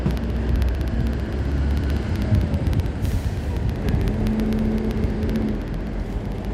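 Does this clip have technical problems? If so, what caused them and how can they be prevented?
Yes. Periodic USB or driver dropouts: something blocks the USB bus or audio driver every 64 ms, from 0.11 s to 6.45 s, so around a hundred tiny slivers of well under a millisecond drop to silence, heard as evenly spaced ticks wherever sound is present. Prevention: find and disable the background task or driver polling that stalls the bus, and use a larger audio buffer or a dedicated USB port.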